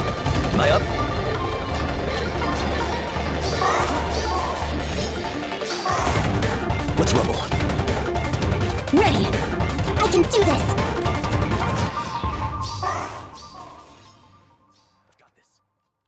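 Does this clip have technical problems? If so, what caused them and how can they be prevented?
No, nothing stood out as a technical problem on listening to this clip.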